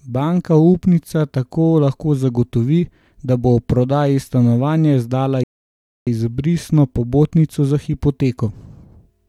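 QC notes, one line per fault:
5.44 to 6.07 s, rebuffering stall: speech drops to silence for 0.63 s, then picks up exactly where it stopped, as playback waited for more downloaded audio.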